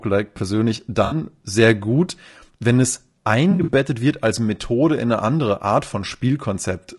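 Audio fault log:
throughout: low-delay AAC compression. The speech sounds rough and grainy, with hiss between the harmonics and a thin, synthetic-sounding top band. The likely cause is AAC-ELD's short frames, which resolve pitch harmonics poorly, at a bitrate that sounds like around 32 kbps.
1.05–1.15 s and 3.51–3.70 s: AAC frame loss with concealment. Each spot is a brief smeared, noisy, phasey patch, the second spread over about 160 ms in short gaps of about 40 ms at most. The decoder fills lost frames by reusing the last good spectrum, so the sound blurs rather than cutting out.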